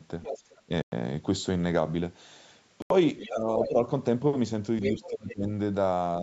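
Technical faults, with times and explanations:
0.22–0.61, 3.19–3.32, 3.62–3.69 and 4.82–5.35 s: other side's voice leaking through. A second, fainter voice sits some 5 to 15 dB under the talker, likely loudspeaker echo the canceller left in.
0.66–0.71, 3.31–3.48, 3.68–3.78 and 4.95–5.49 s: speech suppressed in double talk. The talker dips by up to about 15 dB while the echo plays, likely the canceller ducking both voices together.
0.82–0.92 and 2.82–2.91 s: Bluetooth dropout. The output falls silent for 101.6 ms, then 81.3 ms, with later sound continuing onward, likely from late packets being dropped.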